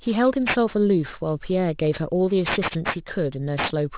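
Aliasing runs through the whole speech clip: content above 4 kHz folds back below that edge at fairly high level, suggesting a drop toward an 8 kHz rate with no filter first. Sibilants turn gritty and metallic, unlike plain band-limiting, which would only sound dull.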